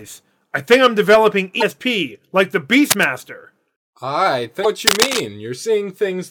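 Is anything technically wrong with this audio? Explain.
Yes, there are two kinds of fault in this speech clip.

Damaged data in a compressed stream occurs twice, from 1.58 to 1.63 s, just after "I think I'm developing", and again from 4.61 to 4.66 s. Both times, corrupted bytes in the encoded stream make the decoder misread the frames, lose its place and hunt for the next valid frame header. Each one is heard as a short chirp or squawk of about 40 ms.

Cable scratch noise appears from 2.90 to 3.06 s, right after "like the", and again from 4.86 to 5.20 s. This is likely a worn cable, connector or control being moved, so its contact resistance flickers rapidly and lets irregular bursts of noise into the signal. The scratching and rustling reach roughly the same loudness as the speech and rasp over it for about a sixth of a second the first time and about a third of a second the second time.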